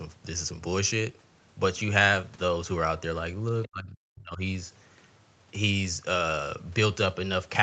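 Speech with two call-processing faults close together. From 3.63 to 3.68 s, a brief scrap of the other side's voice leaking through can be heard, sitting roughly 20 dB below the talker. This is likely loudspeaker echo that the canceller failed to remove. On a spectrogram it shows as a faint, separate harmonic trace laid over the main speech, and on the waveform it is barely visible as a small bump. Right after, from 3.68 to 4.4 s, the speech is suppressed in double talk. For about three quarters of a second the talker's level collapses, at its deepest by something like 40 dB, so the voice dips. The likely cause is the echo canceller turning everything down while both sides spoke. The waveform shows a sharp hollow in the envelope, and the spectrogram shows the energy below the 8 kHz band edge thinning across that span.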